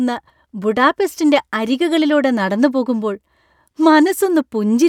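No technical faults are audible.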